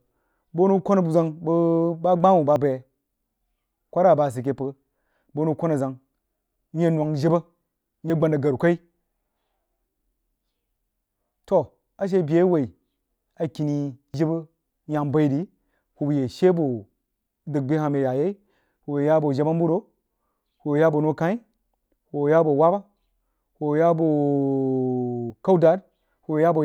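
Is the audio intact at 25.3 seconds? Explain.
No. At 25.3 s there is a dropped buffer (overrun), likely caused by the program failing to read its samples before the hardware overwrote them. Roughly 70 ms of speech vanishes, and the two sides butt together with an abrupt jump.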